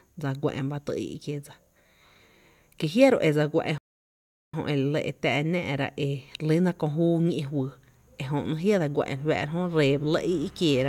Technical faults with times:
3.78-4.54 playback stall

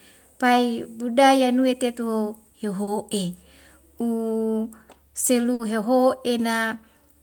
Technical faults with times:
2.83-2.89 short concealed packet loss
5.53-5.61 burst of packet loss

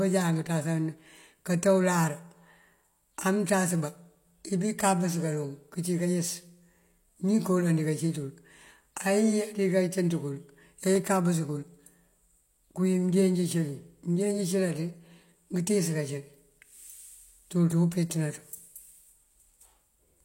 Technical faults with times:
10.96 dropped samples
13.83 dropped samples

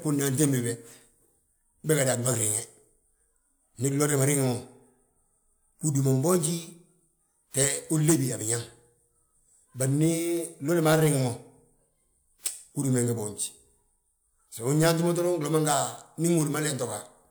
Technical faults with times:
none

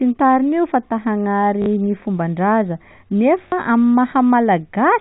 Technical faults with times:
1.62-1.66 packet loss with last packet repeated
3.48-3.52 packet loss with last packet repeated

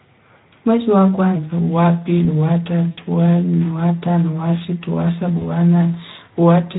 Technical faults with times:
0.00-6.78 Speex codec
1.36-6.78 section at the wrong speed
2.91-3.00 VoIP packet loss concealed by the speech codec
5.37-5.45 VoIP packet loss concealed by the speech codec

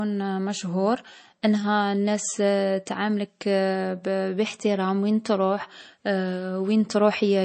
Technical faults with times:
0.00-7.45 MP3 compression

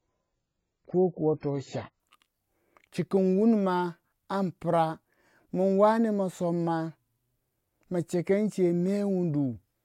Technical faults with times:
0.00-2.00 adaptive stream starting at a low bitrate

